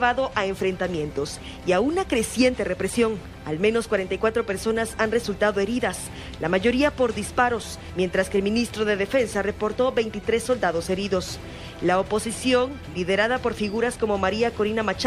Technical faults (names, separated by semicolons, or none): none